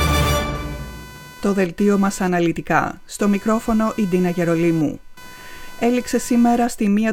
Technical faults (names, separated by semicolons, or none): computer activity noise